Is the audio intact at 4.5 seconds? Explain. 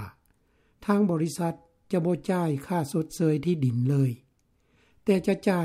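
Yes, at 4.5 seconds the audio is intact, with nothing there to break the signal.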